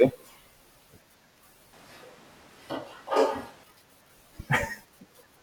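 At 1.73 s the speech suddenly goes roomy and hollow, losing its bass, and the background noise rises to roughly 25 dB below the speech, though the overall level stays about the same. At 3.63 s it snaps straight back to the close, full sound. That's a switch to a distant microphone: the close mic's signal likely dropped out, so for those two seconds we're hearing a mic further away that picks up more of the room.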